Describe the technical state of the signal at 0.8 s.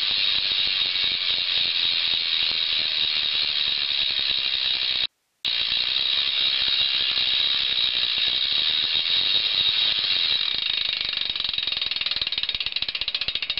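At 0.80 s, compressed frames are skipped. A short run of coded frames never reaches the output, either missing from the file or rejected by the decoder as damaged. The sound jumps forward by roughly 70 ms, which fits about three frames of around 23 ms each. Nothing fills the gap, so the audio on either side is joined directly. Where the two sides meet there is a brief discontinuity, heard as a quick blip or click.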